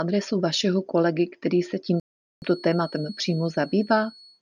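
A loudspeaker-to-microphone loop likely sitting right at the edge of feedback produces a feedback whistle in this speech recording: from 1.89 s to the end, a thin, steady tone near 4.4 kHz hangs well below the speech, swelling and fading slowly in level without building up. A rebuffering stall follows when the player exhausts its downloaded audio at 2.00 s and waits for more; the sound drops to silence until 2.42 s, then resumes exactly where it stopped, adding about 0.42 s with nothing lost.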